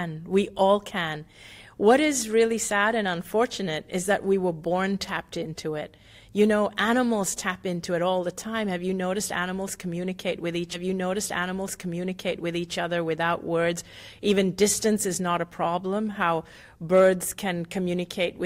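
A stream segment repeated from 10.73 to 12.73 s: the player fetched or queued the same two-second chunk twice, so the audio jumps back and replays that stretch, with a small blip marking the seam where the duplicate begins.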